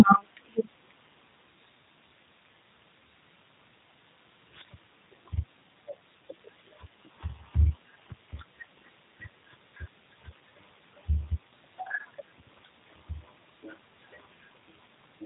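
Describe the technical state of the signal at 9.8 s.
At 9.8 s the speech carries G.729 codec damage, present throughout the clip rather than starting there. Each 10 ms frame is rebuilt from a vocal tract filter, a pitch predictor and a few sparse pulses, a coarse model that fits an 8 kbit/s G.729A stream. The result is a plainly audible rough, synthetic edge on the voice, and nothing above about 3.8 kHz survives, so sibilants and breath lose their brightness.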